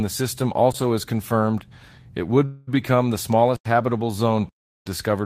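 At 0.72 s, between "the system" and "is confirmed it", the speech drops into a block of digital silence for about 22 ms. The sound cuts out, most likely because the output buffer was not filled in time. There is no fade, so it is heard as a short hole. On a waveform it shows as a flat line. On a spectrogram it is a thin black column.

From 2.45 to 2.69 s there is a call audio freeze. The sound before it is stretched into a fading buzz for about 218 ms, and the speech then resumes where it stopped, so nothing is lost but everything after is 218 ms late. The likely cause is delayed packets emptying the jitter buffer. On a spectrogram the last frame's harmonics smear horizontally and dim. The waveform shows a repetitive, decaying pattern with no true silence.

At 3.56 to 3.66 s, between "become the" and "habitable zone", a 93 ms hole appears, which fits a 4096-sample block. At 4.49 to 4.86 s, right after "habitable zone", a longer 372 ms gap follows, which fits 16384 samples. 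Both are further blocks of digital silence. They look like wider flat stretches and black spectrogram bands.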